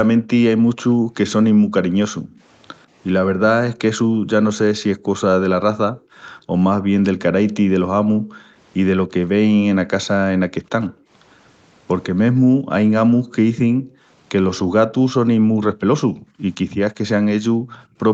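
From 0.56 to 4.28 s the background is gated by the echo canceller, cutting room noise by up to about 40 dB in brief holes that show as blank gaps in the spectrogram's noise floor. From 2.31 to 6.02 s an echo leak follows, likely from a far-end loudspeaker: a faint copy of the speech arrives 143 ms late, roughly 25 dB down, visible as repeated harmonic ridges. The same gating returns at 5.96 to 6.52 s (about 22 dB) and 8.03 to 8.57 s (about 16 dB). The echo reappears at 9.07 to 10.53 s. Gating runs again from 10.9 to 17.98 s, up to about 35 dB. Echo recurs at 13.28 to 14.59 s, with a brief scrap at 17.68 s. Throughout, the 8 kHz ceiling of the Opus call path shows as an empty band at the top of the spectrogram.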